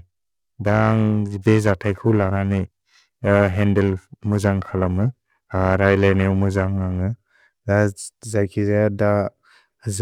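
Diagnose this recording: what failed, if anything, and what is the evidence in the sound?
Periodic clock jitter at the converter, from 0.00 to 7.01 s: sidebands around 700 Hz away from each component give the speech a metallic edge. Unlike a steady interfering tone, this roughness vanishes in pauses.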